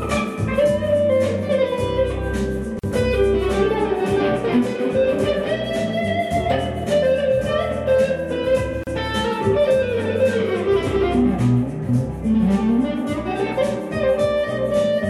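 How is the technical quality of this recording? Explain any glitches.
Two short dropouts break the sound, six seconds apart. Each is a gap at a join of encoded pieces. At 2.79 s the sound stops for about 44 ms. At 8.84 s it stops for about 34 ms. Each piece was encoded on its own, and the encoder's start delay and final-frame padding were never trimmed. Joining them leaves silence. Its edges are smeared by the codec, and the sound resumes where it stopped.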